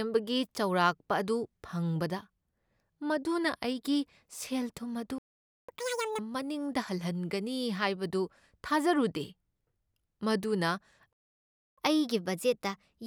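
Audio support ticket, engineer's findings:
Playback stall: speech cuts to silence at 5.18–5.69 s (about 0.5 s) and 11.13–11.78 s (about 0.65 s), then resumes mid-flow. Likely cause: playback buffer underrun or blocked audio thread; output starved of samples until the decoder refilled.

Catch-up at higher speed: follows each stall. 5.69–6.19 s at 2.0x speed, pitch up roughly ten semitones, audibly chipmunked. 11.78 s to end at 1.1x, pitch up about a semitone and a half. Player resampling its backlog to recover lost time.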